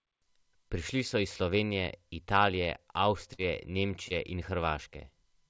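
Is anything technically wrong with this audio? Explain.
Yes. Short concealed packet loss occurs at 3.34 to 3.40 s and again at 4.08 to 4.12 s, heard through a call path whose band stops at 8 kHz. About 40 ms, then 20 ms, of audio arrived too late, so the receiver extended the preceding sound and blended back, leaving a brief smear or wobble.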